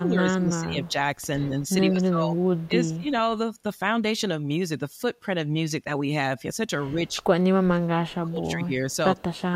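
From 0.0 to 3.08 s the speech dips in level, by about 15 dB at worst, over roughly one and a half seconds in pieces. This is likely speech suppressed in double talk. The echo canceller turned down the talker along with the far side. From 0.83 to 2.98 s a faint copy of the speech trails 113 ms behind, about 30 dB down. That is likely an echo leak. The far end's canceller let its loudspeaker pickup through. From 6.92 s to the end the speech drops again, by about 25 dB at worst, for roughly one and a half seconds in pieces. The same 113 ms echo returns briefly at 7.07 to 7.16 s, about 40 dB down. It comes back at 8.91 to 9.41 s, about 30 dB down.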